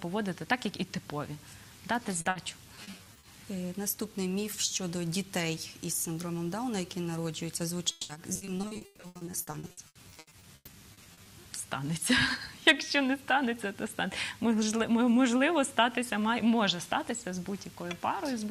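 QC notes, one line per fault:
2.21–2.27 s, short concealed packet loss: about 40 ms of audio arrived too late to be decoded, so the receiver extended the preceding sound across the hole and crossfaded back. The result is a brief smear or wobble, and that sliver of content is gone.
2.29–2.37 s, burst of packet loss: right after, a 60 ms run of packets was lost or late. The decoder held the last sound and faded it through the gap, producing a short held buzz or hiss. Playback then resumes further along, with that stretch missing.
2.75–3.25 s, repeated packet loss (robotic sound): over half a second, seven separate holes, none longer than 40 ms, were patched by repeating the previous sound. About a third of this span is synthetic fill, giving a choppy texture with small pieces dropped.
7.91–11.27 s, repeated packet loss (robotic sound): a sustained bout of 33 losses, the longest 180 ms, left about 1.4 s of the 3.4 s span concealed. 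The constant patching makes the audio sound choppy and broken up, with sizeable chunks absent.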